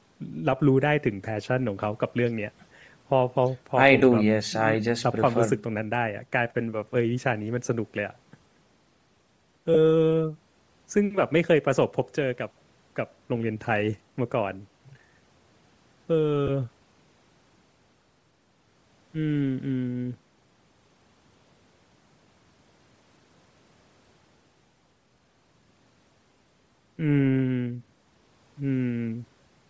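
Throughout the speech there is a breathy, grainy edge on the voice, most likely from Bluetooth LC3 compression at a low rate, which fits about 32 kbps with 7.5 ms frames: the codec zeroes upper spectral bands and fills them with noise. On a spectrogram that appears as speckled, patchy energy below the 8 kHz ceiling left by the call's microphone path.

At 3.99 s, 9.74–9.76 s and 16.47–16.49 s come lost LE Audio frames, each gap about 15 ms, which points to two frames. The decoder repeats the last spectrum with scrambled phase, giving a brief noisy smear. A spectrogram shows short smeared vertical bands, and the waveform shows a blurred patch.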